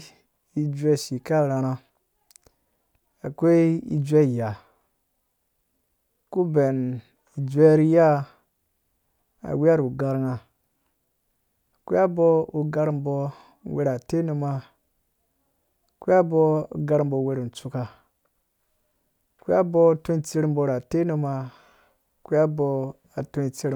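No technical faults are audible anywhere in the speech recording.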